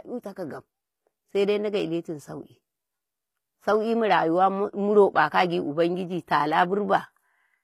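From start to finish the treble sounds synthetic: s sounds come out gritty and lisping, with a metallic sheen above the lower band. This is likely HE-AAC compression at a rate fitting about 24 kbps, the upper range rebuilt by copying lower bands upward.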